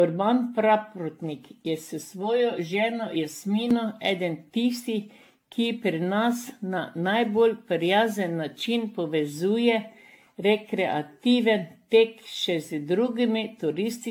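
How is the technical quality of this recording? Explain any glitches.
The recording has two technical problems. One runs through the whole clip and one is brief.

Generation loss affects the entire clip. The speech sounds swirly and hollow, and consonant attacks are smeared. Nothing remains above 18.6 kHz. The likely cause is repeated lossy re-encoding, perhaps around fifteen passes, with a character that points to AAC-LC at about 96 kbit/s. Each pass quantises on a new frame grid. Noise and spectral holes pile up beyond what one encode at that rate would cause.

Channel delay (comb filtering) appears from 2.03 to 3.71 s. One channel lags the other by roughly 5 ms, and the two are summed to mono. Content shared by both channels cancels at evenly spaced frequencies. The first notch sits near 100 Hz, with more notches repeating about every 200 Hz above it. During that stretch the speech turns hollow and phasey. 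It sounds as if heard through a tube.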